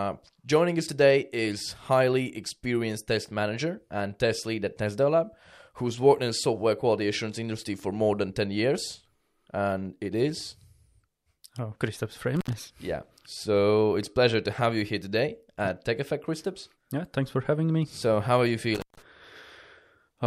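Intermittent contact at 12.36 to 12.53 s and again at 18.75 to 19.02 s, just after "how are you": a loose connection briefly opens, cutting the speech for about 72 ms and then 156 ms, with crackle at each break and faint hiss while the line is open.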